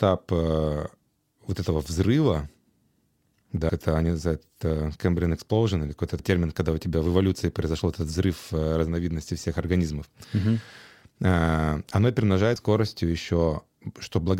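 At 3.70 s, just before "это они называют э", at 6.19 s before "термин когда у тебя", and at 12.56 s, damaged data in a compressed stream makes the decoder lose sync, giving brief blips.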